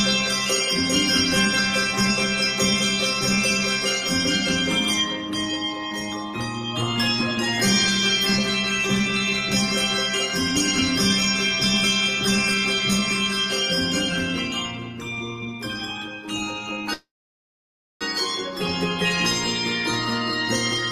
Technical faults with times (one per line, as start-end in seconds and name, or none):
16.93-18.04 call audio freeze